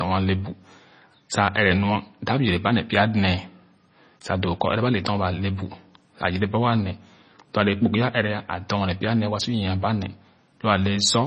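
From start to end, the speech has no content above 9.4 kHz, a watery, swirling texture and smeared consonant onsets. That points to heavy MP3 compression, likely at a low bitrate near 24 kbps, cutting the treble and dropping weak frequency lines frame by frame.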